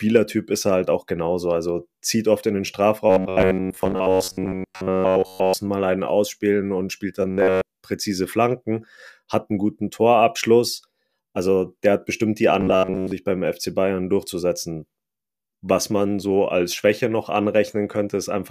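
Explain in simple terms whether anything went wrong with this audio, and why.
Robotic sound from repeated short buffers at 3.10–5.54 s, 7.22–7.61 s and 12.61–13.12 s: speech turns into a flat, metallic buzz near 94 Hz. This is likely from tiny slices of about 11 ms being replayed again and again, which sets that fixed pitch. Unlike a dropout, it never goes silent.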